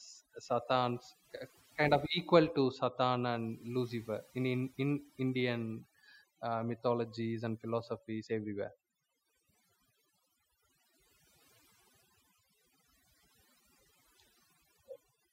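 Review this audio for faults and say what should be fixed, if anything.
Overdone noise removal runs through the whole speech clip. The noise reduction was pushed hard enough that frequency bands near the noise estimate are cut out, taking quiet speech detail with them. The background drops and breaks up into twinkling specks. Set the reduction amount lower, so some steady background noise remains.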